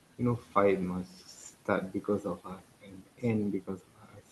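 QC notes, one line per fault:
Throughout: noise suppressor artifacts. The suppressor lowers the bands it judges to be steady room noise (about 17 dB below the speech) frame by frame, so the noise floor pumps between and under phrases. On a spectrogram the background flickers in patchy blocks instead of holding a smooth, even floor.
0.00–0.21 s, 0.38–0.56 s, 1.04–3.24 s and 3.61–4.32 s: speech cut by the noise suppressor. Parts of the speech are mistaken for noise and pulled down with it, by up to about 19, 16, 19 and 18 dB, so quiet consonants and endings sound swallowed. Most of the long middle stretch is affected. The waveform shows sudden dips in the envelope, and the spectrogram shows high-frequency consonant energy missing in holes below the roughly 12 kHz ceiling of the call codec.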